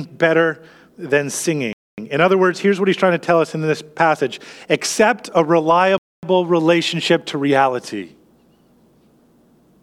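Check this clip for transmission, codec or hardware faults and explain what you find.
The speech has a gap between chunks: two silent holes of 250 ms each, from 1.73 to 1.98 s after "better than" and from 5.98 to 6.23 s between "this passage accept a" and "relationship to reality". The audio seems to have been delivered in 4-second blocks with silence inserted at each join. Each hole starts and ends abruptly. Unlike a dropout, no speech is missing: it resumes exactly where it stopped, just delayed.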